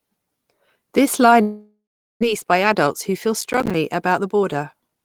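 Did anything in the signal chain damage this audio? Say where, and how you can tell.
Yes. From 1.41 to 2.25 s the audio breaks off: the last sound is stretched into a fading buzz, then about 400 ms of near silence, and speech resumes with roughly 600 ms missing. This is likely a long network dropout, with receiver concealment filling the gap.

After the gap, from 2.33 to 5.03 s, the speech runs about 7% fast at unchanged pitch and sounds slightly hurried. This is jitter buffer speed-up. Having built up around 200 ms of excess delay, the receiver trims short pitch-period slices repeatedly to drain it.

Between 3.41 and 3.74 s a gritty crackle rides on the speech. This is processor overload crackle at the driver or buffer stage. Around fifteen small buffers, which fits roughly 5 ms each, missed their deadlines and were output as silence, leaving hard-edged micro-gaps.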